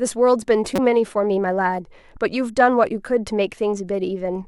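At 0.76 to 0.79 s a brief glitch breaks the speech: a corrupt frame decoded. Damaged bits in what sounds like one compressed frame were played anyway, misplacing energy across frequencies. The spectrogram shows a short stray smear, and the error peaks near -10 dBFS.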